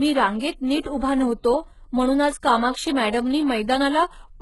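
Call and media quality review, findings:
Speech throughout: treble present but gritty and metallic, s sounds lispy, nothing above 11.4 kHz. Likely HE-AAC compression at a very low bitrate, near 12 kbps. Treble is rebuilt from copied lower bands, so harmonics misalign. Unlike a plain low-pass, the highs remain, but synthetic.

Pre-echo, 0.80 to 0.85 s: about 50 ms of hiss just before a sharp attack, with the attack softened and smeared. A transform block spread its quantisation noise into the quiet moment before the onset. Unlike steady background hiss or a click, this noise sits only ahead of the attack and stops there.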